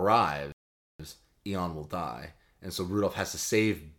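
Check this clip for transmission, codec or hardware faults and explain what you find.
One fault is present: a playback stall from 0.52 s to 1.00 s. The speech cuts off mid-flow and the output goes fully silent for about 470 ms before resuming. The likely cause is the player's buffer running dry or its audio thread being blocked, so no samples reached the output until it recovered. It is heard as an abrupt gap in the speech rather than a natural pause, with delivery picking up again once data flows.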